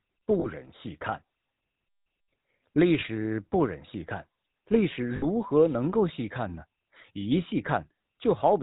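Speech carried through the GSM full-rate codec for the whole clip, with plainly audible codec damage. The coder models the vocal tract and drives it with a sparse, regularly spaced pulse excitation, which gives the speech a buzzy, gravelly roughness consistent with a 13 kbit/s full-rate stream. Nothing above 4 kHz gets through, so the top end is dull. Lost GSM frames appear at 0.40–0.47 s, 3.00–3.04 s and 5.16–5.25 s. Each gap is bridged by repeating the last good frame's settings, heard as a brief rough, metallic ring. The three gaps span roughly 40 ms, 20 ms and 60 ms, which fits two, one and three 20 ms frames respectively.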